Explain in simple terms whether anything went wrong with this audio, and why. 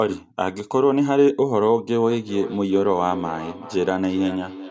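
From 2.09 s on, speech returns as thin, ringing repeats roughly every 0.4 s. This is feedback echo between two devices, with one replaying the call into the other's microphone.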